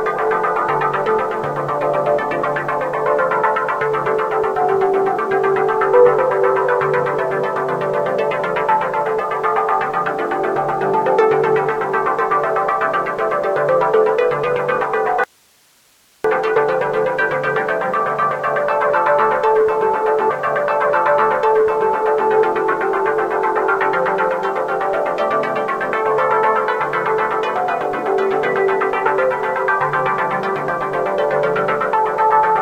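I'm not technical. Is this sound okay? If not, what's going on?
No, not quite. At 15.24 s the sound suddenly cuts out and doesn't return until 16.24 s, so about a second goes missing. That's an audio dropout to a faint residue: the gap isn't true silence but a quiet hiss, well below the normal level. It switches off and back on abruptly, not like a natural pause. The likely cause is the signal itself being lost for a moment while the recording chain stayed switched on, so only its background hiss got through.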